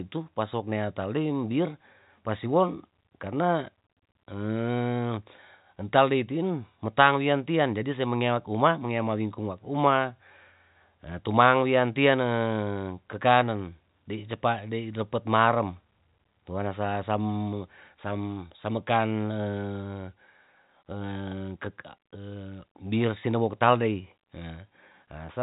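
No technical faults can be heard in this speech clip. It has the band-limited sound of G.711 telephone coding, with nothing above about 3.8 kHz and only faint quantisation noise that follows the level of the speech.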